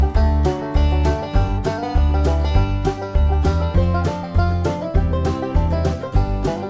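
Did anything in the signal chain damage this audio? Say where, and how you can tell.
No, nothing in the chain audibly damaged this audio, so there is no stage to point to.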